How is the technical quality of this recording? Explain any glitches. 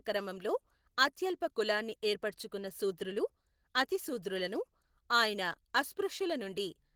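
The quality is held back by plainly audible codec damage across the whole clip. Throughout, the speech sounds hoarse and slightly robotic, with a grainy roughness in the voicing. This is Opus voice compression at 16 kbps in hybrid mode with 20 ms frames: a linear-prediction coder carries the band up to 8 kHz with a coarsely coded excitation, while a transform layer sketches the content above that, up to about 20.2 kHz, with very few bits.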